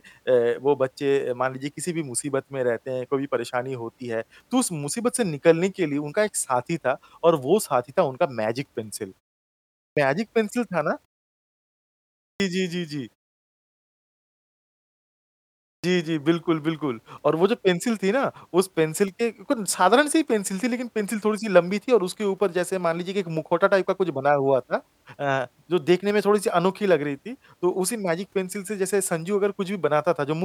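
At 9.5, 11.97 and 15.43 s, speech resumes with a clipped start after a pause: the output wakes late after silences of 0.38, 1.0 and 2.36 s, swallowing roughly 0.4 to 0.47 s of onset. Unlike muted pauses, actual speech is lost.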